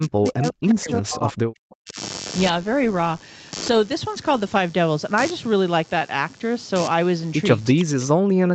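Speech, carrying a computer activity noise throughout: a buzz pulsing roughly 100 times a second, sitting about 15 dB below the speech. It tracks load on the computer rather than the talker, as processor, graphics or mouse activity disturbs the audio circuit's shared ground. From 0 to 2.0 s, and again from 7.74 s to the end, the speech drops sharply, by around 40 dB at its deepest. This is likely speech suppressed in double talk, where the echo canceller, unable to separate the local talker from the far side's loudspeaker echo during overlapping talk, attenuated both. Within that second stretch, from 7.79 to 7.84 s, a brief echo leak appears: a faint copy of the speech about 20 dB down, arriving 356 ms late. It likely comes from a loudspeaker echo that one side's canceller failed to fully remove, so it was sent back. The Opus call path's 8 kHz bandwidth limit is audible as the absence of content above that frequency.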